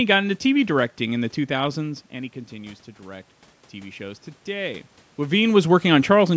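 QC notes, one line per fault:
1.14 to 5.47 s, automatic gain rising: the input drops by about 13 dB, so the AGC slowly climbs about 5 dB over four-odd seconds, and the room noise swells right along with the voice. The level shifts near 2 s and 5 s are just the talker moving.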